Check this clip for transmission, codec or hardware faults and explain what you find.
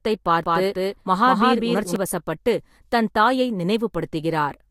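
One fault is present. From 0.44 to 1.96 s, a doubled audio track: an equally loud copy trails roughly 200 ms behind, likely via a slower path. Unlike echo, it never decays.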